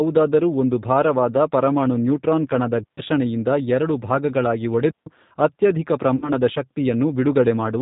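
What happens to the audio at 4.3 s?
At 4.3 s the speech carries the same G.729 codec damage heard across the whole clip, and it is plainly audible. The coder rebuilds each 10 ms frame from a vocal tract filter, a pitch predictor and a sparse set of pulses, so nothing above 4 kHz survives and the voice sounds muffled, slightly rough and synthetic. The narrow band and buzzy texture fit an 8 kbit/s G.729A-type coder.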